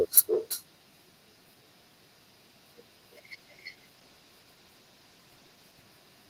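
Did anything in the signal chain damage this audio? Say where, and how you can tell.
Yes. Right through the clip there's echo with no canceller, a call-processing failure. Every phrase gets shadowed by a thinner copy about 9 dB down, arriving roughly a third of a second later. That's the far end's loudspeaker leaking into its mic and nothing subtracting it.

There's also a call bitrate drop, where the network and codec stages meet. From 3.29 s to 5.89 s the sound goes rougher and duller as the encoder falls from 32 to 18 kbps and sits at the bottom for about 2.5 s, coding coarsely and trimming the top end.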